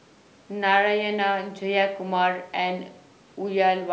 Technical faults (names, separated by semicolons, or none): none